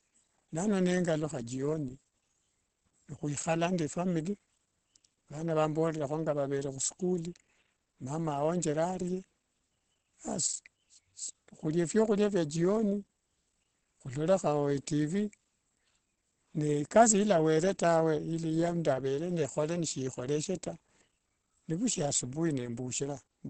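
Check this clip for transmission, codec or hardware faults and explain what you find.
One codec fault runs through the whole clip. Opus compression, throughout: nothing sounds above 8.6 kHz, and the muffled, hoarse texture fits a low-rate speech mode, likely around 16 kbps.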